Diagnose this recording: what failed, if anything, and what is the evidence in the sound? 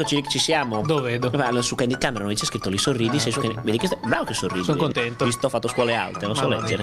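Nothing failed here: listening at every stage from capture to playback, there's no break, glitch or distortion to point to, so there's no fault to diagnose.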